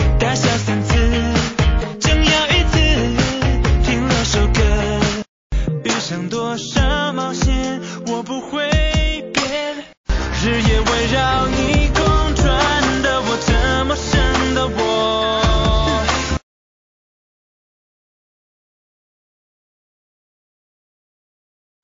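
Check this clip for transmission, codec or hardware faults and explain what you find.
Two codec problems stand out: plainly audible compression damage throughout and one clear pre-echo.

Throughout the clip the sound is watery and swirly, with dull treble and metallic chirps on bright sounds. That's most likely MP3 compression starved of bits, probably near 32 kbps: the encoder chops off the highs and lets weak frequency lines flicker on and off between frames.

Around 10.05 to 10.09 s there's pre-echo: a hiss about 47 ms long, roughly 29 dB up, creeping in just before a sharp attack, which then sounds smeared. The noise meant for the loud hit got spread across a long block, suggesting the encoder never switched to short blocks.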